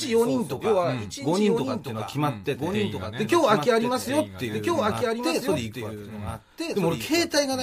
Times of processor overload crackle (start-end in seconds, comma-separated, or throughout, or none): none